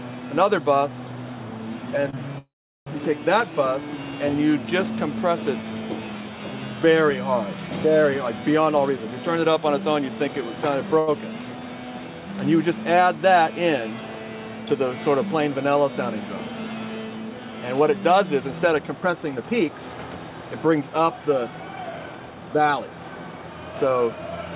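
At 2.10 to 2.15 s there's a short stall from a late packet. A packet didn't show up on time, the jitter buffer ran dry, and the receiver held the last bit of sound for about 29 ms until the data arrived. Playback then picks up right where it left off, so nothing's lost. You just hear a brief smear or slight buzz where the sound hangs a touch too long.

Right after, from 2.38 to 2.88 s, comes a call audio freeze. The last sound carries on briefly as a fading buzz and then drops out to silence for about 400 ms. The whole thing adds nearly half a second of delay before the audio resumes from the same spot. The likely cause is packets held up in transit, leaving the jitter buffer empty for that stretch.

From 8.68 to 10.57 s the jitter buffer speed-up kicks in. With too much audio queued, the receiver trims tiny pitch-period-sized slices over and over, so playback runs about 10% fast while the pitch stays put. 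It sounds a bit rushed, and around a fifth of a second gets shaved off.

At 10.99 to 11.09 s there's another short stall from a late packet, longer this time at about 83 ms. You can hear the sound being stretched before things catch up.

From 17.80 s right through to 24.51 s there's a second, gentler speed-up at about 104%. It trims roughly 0.3 seconds.

Nothing is heard above 4 kHz, which fits a G.711 mu-law call path at 64 kbps.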